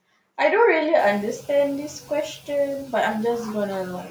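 It's a speech clip, and right around the one-second mark the room noise jumps by about 20 dB. From 0.98 to 1.18 s you hear the noise suppressor catching up: its estimate lags the sudden rise, so the noise gets through with little reduction before sinking by about 4 dB over roughly 200 ms. After that, the room noise sits about 21 dB below the speech.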